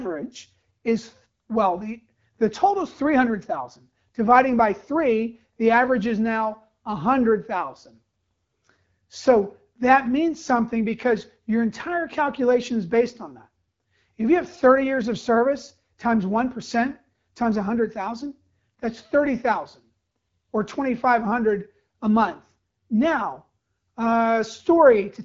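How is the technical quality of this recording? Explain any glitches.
Nothing goes wrong in this speech recording, which comes through an HD Voice (AMR wideband) path at what sounds like 12.65 kbit/s, so the top end stops at roughly 7.3 kHz, just as that kind of call normally sounds.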